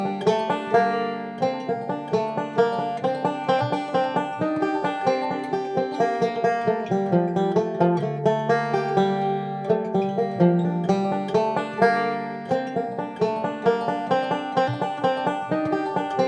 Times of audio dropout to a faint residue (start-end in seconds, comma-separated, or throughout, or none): none